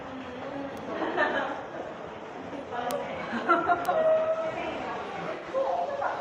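Single sharp ticks land at 0.77, 2.91 and 3.85 s. Each is a broadband click with no relation to the surrounding sound. These are bit error spikes: a flipped bit pushes a couple of consecutive samples far off by a power of two before they snap back.

From 5.34 to 5.46 s the sound turns smeared and noisy for about 85 ms. This is AAC frame loss with concealment. The gap fits roughly two missing frames, and the decoder rebuilt them from the last good spectrum instead of the real signal.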